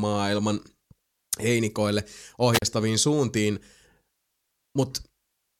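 A speech recording with a wireless microphone squelch dropout from 2.53 to 2.62 s: the radio link faded and the receiver muted, leaving a roughly 39 ms silent hole.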